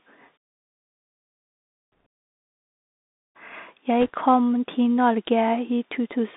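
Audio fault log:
throughout Bluetooth CVSD headset codec: band held to 200 Hz–3.7 kHz, scratchy s sounds and a steady granular hiss from one-bit up/down steps, fitting a 64 kbps stream.
2.00–2.06 s and 4.01–4.10 s (just before "kom til") bit errors on a Bluetooth voice link: short rushing crackle, no sharp clicks, because flipped bits (around 1.5 percent) each carry equal weight and their errors die away fast.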